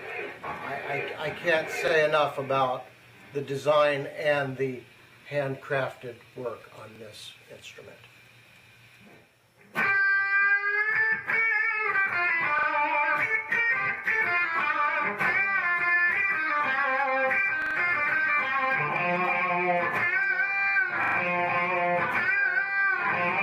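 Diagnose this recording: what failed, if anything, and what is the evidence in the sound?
Stutters at 1.88, 6.96, 12.59, 17.62 and 21.04 s, a 43 ms slice replaying one to three extra times: a repeated buffer at the driver, fitting 2048 samples.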